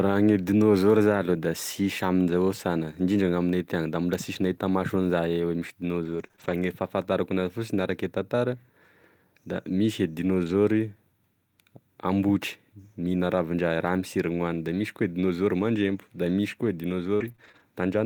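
Around 6.03 to 6.50 s there's repeated packet loss, the robotic sound. Three short holes, the longest 23 ms, each get patched by stretching the last bit of audio. About 14% of that stretch is concealed, so it comes out choppy.

At 8.20 to 8.22 s, and again at 10.44 to 10.50 s, there's a lost packet rebuilt from error correction. You don't hear a gap, just a brief rougher, noisier patch of 20 ms and then 40 ms. The second one sounds like two packets filled in from the low-bitrate copies carried in the packets after them.

The robotic chop comes back at 17.16 to 17.61 s, and it's worse this time. There are four holes, the longest 42 ms, and about a fifth of that stretch is concealed.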